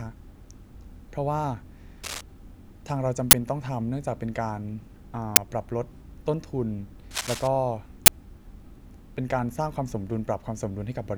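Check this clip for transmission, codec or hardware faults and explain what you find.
There are two problems here: two stretches of scratchy noise and three very short digital bursts.

Cable scratch noise sits at 2.03 to 2.21 s and again at 7.11 to 7.48 s. It's a dense, ragged rustle laid right over the speech, only a little quieter than the speech itself. The likely cause is a worn cable, connector or control being moved. As the contact jiggles, its resistance keeps jumping around, and those rapid changes get added to the signal as uneven crackly noise.

The uninitialised buffer faults are the three quick hits: 3.31 to 3.33 s, a single one at 5.36 s, and 8.06 to 8.08 s. The first and last each last 20 ms, and the middle one 10 ms. Each time, a block of audio got played out before anything had been written into it. Whatever junk was sitting in that memory came out as samples, so you get a sharp, very loud splat of digital noise that cuts straight across the speech.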